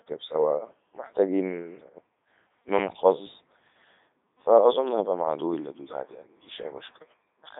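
Speech carried throughout by the Codec 2 vocoder, rebuilt from sine waves instead of the waveform, so it sounds robotic and buzzy rather than merely muffled. It sits in a phone-like band of 250 Hz to 3.7 kHz, with nothing above 3.8 kHz, and heavy coding damage that fits 3.2 kbit/s.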